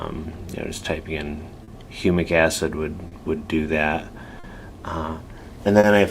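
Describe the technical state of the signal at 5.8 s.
At 5.80 to 5.87 s there is a short stall from a late packet. A packet missed its slot, the jitter buffer ran dry, and the receiver held the last sound for about 40 ms until the packet arrived. Nothing is lost, but the sound lingers with a slight buzz or dip. On a spectrogram the frequency content freezes into flat horizontal bands; the waveform shows a brief repeating, periodic stretch.

This moment also sits within clock drift between sender and receiver, which runs throughout. The sender's clock runs roughly 3% slow, so the buffer keeps draining and the receiver repeats short pieces to fill it. That produces recurring small timing hiccups, visible as tiny duplicated segments or seams in the waveform at uneven spacing.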